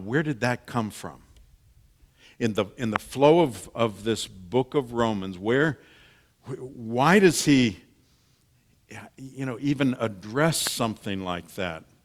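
Loud pops at 2.96 s, between "the in the" and "flow of of this", and at 10.67 s, after "you know even address". Each is a single sharp click, about 20 dB and then about 15 dB above the speech, which continues underneath. A brief electrical pulse, likely from a switch, static or a driver glitch, entered the signal.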